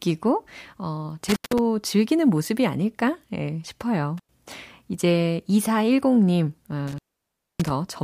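A speech recording with an intermittent contact, probably a loose cable or plug briefly opening the line. The sound drops out with a crackle at each edge three times: from 1.29 to 1.59 s, the line is open for about 154 ms; from 4.18 to 4.31 s, for about 93 ms; and from 6.87 to 7.70 s, for a much longer 612 ms. During those gaps faint hiss gets through.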